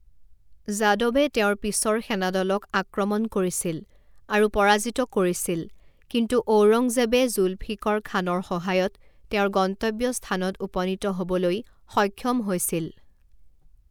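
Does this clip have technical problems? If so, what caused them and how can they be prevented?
No, nothing technical stands out here, so there's no fault to trace back or guard against in this speech clip.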